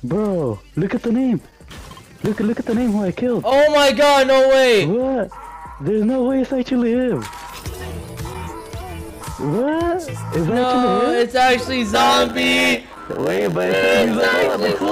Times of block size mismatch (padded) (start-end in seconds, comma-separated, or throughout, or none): 11.93-14.91